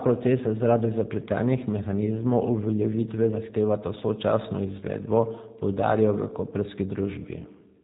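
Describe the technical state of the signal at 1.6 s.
At 1.6 s, as across the whole clip, the speech carries G.729 codec damage: rebuilt from a vocal tract filter, pitch predictor and sparse pulses at what sounds like 8 kbit/s, it is plainly rough and synthetic, not merely muffled as simple low-pass filtering would be, with nothing above 3.8 kHz.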